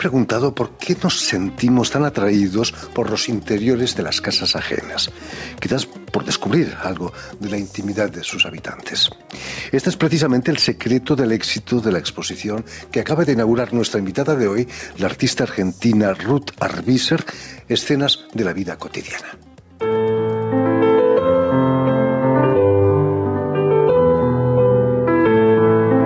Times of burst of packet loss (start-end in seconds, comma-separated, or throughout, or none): none